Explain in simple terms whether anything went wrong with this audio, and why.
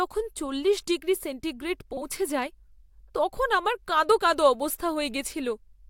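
Frames out of order, from 1.93 to 2.01 s, just after "চল্লিশ ডিগ্রি সেন্টিগ্রেড": for a very short moment the speech gets a garbled flutter. Audio travels in small packets, and here two neighbouring groups arrived swapped and were played in that wrong order. So the back half of that short stretch plays before the front half, each about 43 ms long, which fits two packets per group. Nothing is missing, only rearranged.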